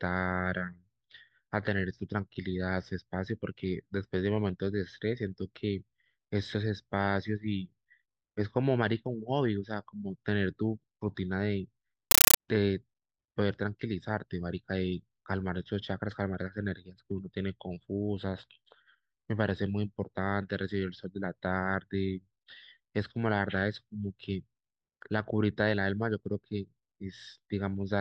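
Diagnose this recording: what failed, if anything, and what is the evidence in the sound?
From 12.11 s to 12.37 s the speech is replaced by very loud, harsh chattering static: short bursts of noise, each about 9.3 ms long, repeating 31.25 times a second with silence between them. This is a compressed stream played as audio, a playback and digital-link failure. Encoded frames reached the output as if they were PCM samples instead of being decoded. The burst pattern fits a 448 kbps AC-3 stream, with each frame's data followed by zero padding.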